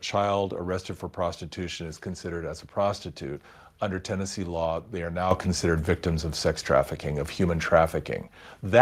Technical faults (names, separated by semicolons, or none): microphone volume stepped up